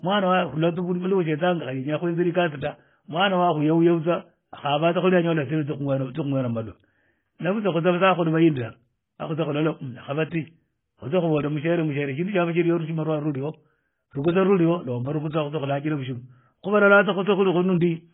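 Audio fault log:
Throughout: transcoding between lossy codecs. The speech sounds dull, with nothing above about 3.7 kHz. There's a mix of the two codecs' different artefacts heard together. It most likely passed through a low-rate AAC-LC stage around 16 kbit/s and was then re-encoded to MP3 around 48 kbit/s. The MP3 stage wasted bits on the first codec's garbage and added its own artefacts on top. The lowest cut-off in the chain stuck through to the end.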